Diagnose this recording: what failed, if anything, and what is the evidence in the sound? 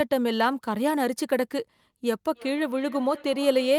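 Feedback echo between two devices in call processing: another device's speaker loops into this microphone, so from 2.34 s the speech repeats roughly every 0.3 s, about 18 dB down.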